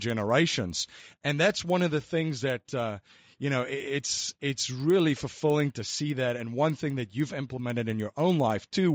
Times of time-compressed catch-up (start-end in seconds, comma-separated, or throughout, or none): none